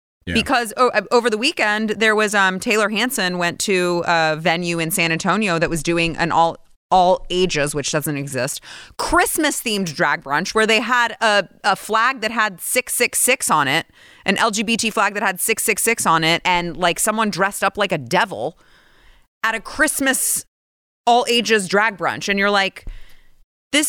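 Speech, with a Bluetooth SBC bit pool drop from 4.75 to 8.37 s. Across that span the treble dulls and a gritty quantisation noise sits under the sound, then both clear. The loss fits the link cutting the SBC bit pool from 31 to 15, around 105 kbps, which starves the upper sub-bands and coarsens the rest. Unlike a fallback to a narrowband call profile, the bandwidth returns on its own and the dullness comes with added grit.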